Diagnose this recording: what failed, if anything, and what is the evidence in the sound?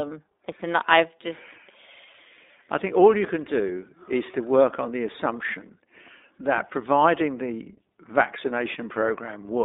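The whole clip has gone through the iLBC codec, a codec stage on a VoIP path. The band runs only from about 250 Hz to 3.7 kHz, and the speech has a plainly audible rough, synthetic edge. The codec builds each 20 ms frame on its own, which fits the 15.2 kbps mode.

There are two lost iLBC frames, a network fault: one at 4.32–4.35 s and one at 6.56–6.59 s. Each gap is about a frame long and sounds like a brief held, slightly buzzy vowel. That's the decoder repeating the last pitch cycle with noise in place of the missing packet. Since iLBC frames stand alone, the speech snaps straight back.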